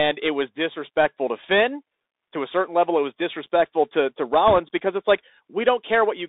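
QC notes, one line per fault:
throughout: Bluetooth CVSD headset codec. The band is held to 300 Hz to 3.7 kHz, and the one-bit adaptive steps plainly leave granular hiss and scratchy, distorted sibilants.
4.48–4.58 s: bit errors on a Bluetooth voice link. Flipped bits, roughly a couple of percent, add a brief rushing crackle without loud clicks, because each CVSD bit carries little weight.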